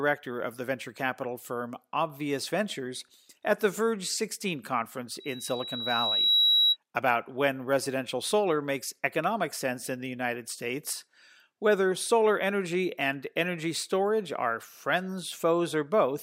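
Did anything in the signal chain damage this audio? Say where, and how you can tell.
Yes. From 5.20 s to 6.77 s a single steady whistle at 3.9 kHz rises out of the speech, swelling over about a second until it sits roughly 5 dB above the talker before it cuts off. That is loudspeaker feedback squeal, damage in the analogue acoustic path around playback. The microphone was hearing its own loudspeaker, and at 3.9 kHz the round-trip gain went above one, so that frequency kept reinforcing itself.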